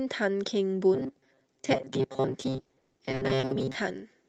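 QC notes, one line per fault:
0.94–3.76 s, robotic sound from repeated short buffers: across this stretch the speech takes on a rigid, metallic buzz near 133 Hz that still tracks the syllables loosely. The likely cause is the playback running dry and looping its last few milliseconds, with about half the time filled this way, which fits a repeat period of roughly 7.5 ms. On a spectrogram this shows as evenly spaced horizontal harmonics at multiples of 133 Hz, and on the waveform as identical short cycles.
2.51–3.51 s, repeated packet loss (robotic sound): within that buzzy stretch the sound turns choppy, with 14 separate holes, the longest 120 ms. Each hole is bridged by extending the preceding sound, so 460 ms of the one-second span, about 46 percent, is filler standing in for 460 ms of missing audio. The waveform shows repeated or smoothly decaying segments where new detail should be, and the spectrogram shows smeared, frozen patches between brief bursts of normal texture, all sitting within the Opus call path's band up to 12 kHz.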